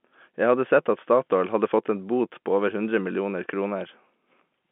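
No technical faults can be heard in the speech. It carries the narrow band of G.711 telephone coding, roughly 200 Hz to 3.5 kHz with nothing above 3.8 kHz, and any quantisation noise from the 64 kbps line is faint at most.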